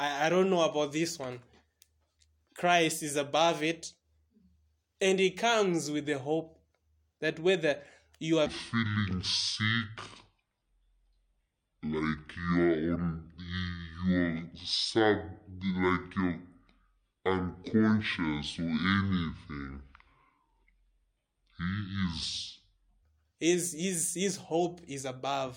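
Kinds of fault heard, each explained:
Section at the wrong speed: from 8.46 to 23.03 s, just before "his his his hope", the speech plays at 0.57 times its proper speed, so pitch drops about ten semitones and everything drags deep and slow, likely from playback against the wrong clock.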